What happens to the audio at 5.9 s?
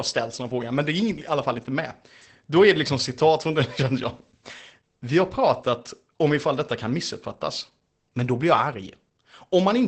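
At 5.9 s, as throughout, Opus voice compression muffles and roughens the speech: the band stops at 8.6 kHz, and coarse SILK coding, fitting roughly 12 kbps, adds hoarseness that simple low-pass filtering wouldn't.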